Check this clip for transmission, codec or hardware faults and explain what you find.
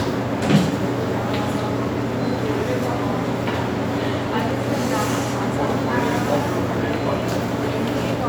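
Nothing stood out on listening to these sounds.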